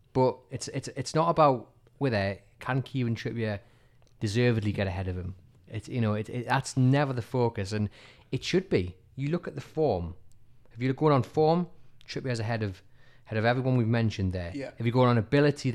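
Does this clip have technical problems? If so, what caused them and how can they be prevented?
Yes. At 11.29 s, just after "you're going on", a sharp click marks dropped samples. About one sample is missing, likely lost to a buffer glitch, so the waveform steps abruptly and the spectrogram shows a thin vertical line. Larger buffers and a stable capture path prevent this.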